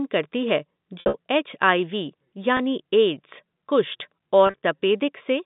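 Speech over a telephone-band line. Packet loss with pitch repetition causes buzzy, held dropouts at 1.0 to 1.14 s after "करती है", at 2.57 to 2.59 s before "एड्स कुष्ठ", and at 4.47 to 4.63 s after "एड्स कुष्ठ".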